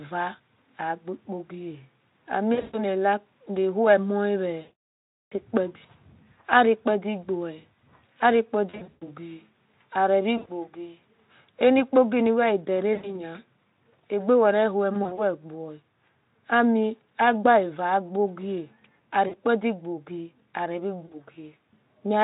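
A speech clip with VoIP packet loss concealed by the speech codec at 2.53, 4.61, 8.69, 10.38, 12.93, 14.94, 19.27 and 21.06 s. Each time, the decoder fills the missing audio by stretching its last pitch and filter into a buzzy tone or a coloured noise that fades. The worst is at 4.61 s, about 700 ms of made-up sound, and the voice stays weak a little after it. The underlying stream sounds like fairly clean Speex.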